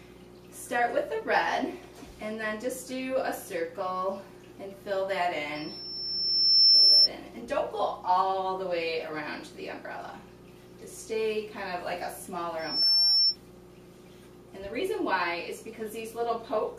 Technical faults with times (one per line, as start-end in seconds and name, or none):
5.55-7.09 loudspeaker feedback squeal
12.59-13.37 loudspeaker feedback squeal